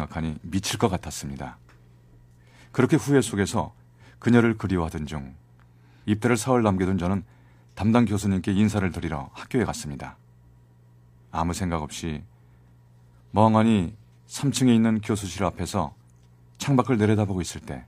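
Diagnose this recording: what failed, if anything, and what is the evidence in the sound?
Nothing in the signal chain failed: the recording holds steady level and continuity throughout, with no dropouts, discontinuities or artefacts that would point to any stage of capture, conversion, processing, transmission or playback.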